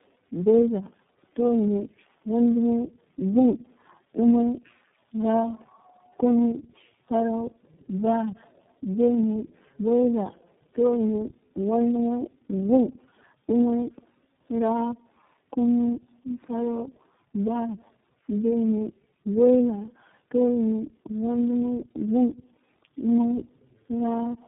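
It's a speech clip, and the whole thing suffers from tandem speech coding. It sounds like the call went through three low-rate speech coders in a row, fitting something like two G.729A hops with an iLBC stage at the end, linked by plain telephone-band sections. Each coder has to re-code the previous one's mangled output, so the roughness and warble stack up. The sound is muffled too, with nothing above 3.7 kHz.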